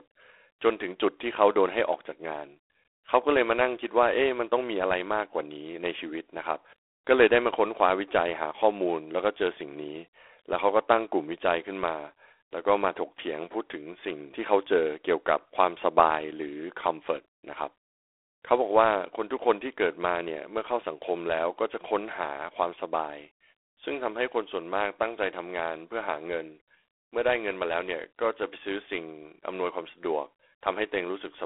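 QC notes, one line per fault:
throughout, G.726 ADPCM: a rasping hiss rides along with the speech level and nothing gets above 3.8 kHz; the coarse step coding sounds like 24 kbit/s.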